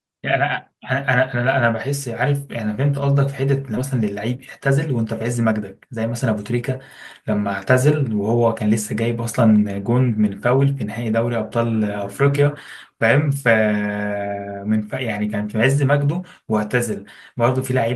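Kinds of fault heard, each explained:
Skip ahead: At 3.77 to 3.79 s the playback just jumps forward with no gap filled in. Around 0.4 s of the speech never gets played, probably dropped because later audio was already queued, so the two sides are stitched almost directly together.
Jitter buffer speed-up: Right after, from 3.93 to 6.70 s, the receiver is clearly draining a backlog by snipping out tiny pitch-period slices again and again. The speech runs at about 107% speed with unchanged pitch, dropping about a fifth of a second overall, and sounds a bit hurried.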